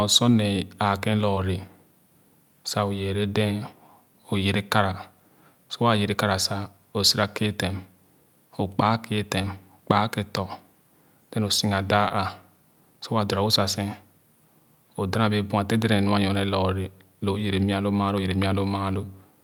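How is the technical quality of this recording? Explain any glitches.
The speech is marred by three instances of short concealed packet loss, at 1.35 to 1.38 s, 9.42 to 9.45 s and 12.08 to 12.12 s. Each time, about 20 ms of the call's data arrived too late for the decoder, and the receiver papered over the gap by extending the preceding sound for roughly 10 ms before blending back into real audio. The result is a brief smear or wobble lasting around 30 ms.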